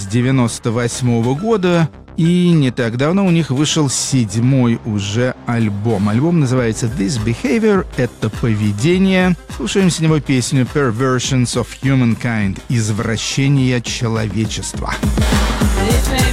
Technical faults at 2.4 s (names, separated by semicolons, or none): none